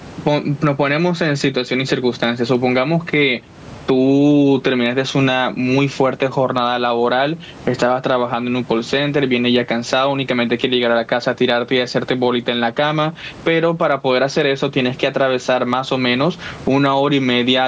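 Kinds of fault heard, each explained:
Gain pumping: the gain swings by about 15 dB, likely a limiter clamping gain set far too high.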